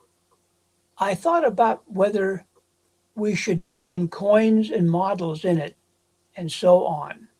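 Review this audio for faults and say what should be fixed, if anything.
From 3.57 to 3.99 s the speech gives way to a buzzy continuation of the last sound that fades out, and about 0.4 s of audio never comes back. That's likely a long network dropout that the receiver papered over. A deeper jitter buffer or some redundancy, like FEC, would help the stream ride out a gap like that.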